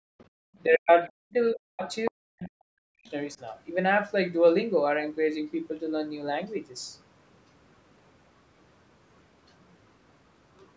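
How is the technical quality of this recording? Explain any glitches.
The first three seconds of the recording have several echo-canceller faults, with the call's normal microphone band limit leaving nothing above 8 kHz.

Background gated by the echo canceller, 0 to 0.37 s: while the loudspeaker played, the canceller pulled the microphone down by about 37 dB. The room sound drops out and then returns. On a spectrogram the noise floor goes nearly blank, and the waveform flattens to a thin line.

Other side's voice leaking through, at 0.19 to 0.25 s, 0.9 to 0.94 s and 2.05 to 2.11 s: short scraps of a second voice come through. They start faint, some 35 and 30 dB below the speech, and the last is only about 15 dB below. The likely cause is loudspeaker echo the canceller failed to remove. These show as brief, weak harmonic smudges.

Speech suppressed in double talk, at 0.65 to 0.91 s, 1.08 to 1.35 s, 1.52 to 1.84 s and 2.1 to 3.08 s: the voice dips hard, roughly 40 dB, for the last stretch about a full second. 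The likely cause is the canceller muting both sides when they overlapped. The waveform shows sudden notches, and the spectrogram shows the voice's harmonics vanishing.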